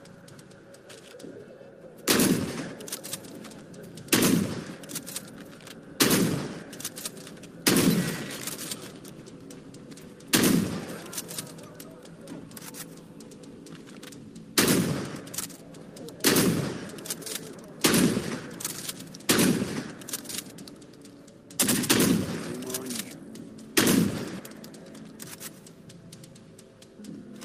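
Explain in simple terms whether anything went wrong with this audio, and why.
Nothing went wrong here; no technical fault turns up anywhere in the recording.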